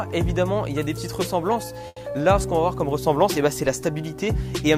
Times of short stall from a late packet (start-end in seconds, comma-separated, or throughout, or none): 1.87-1.98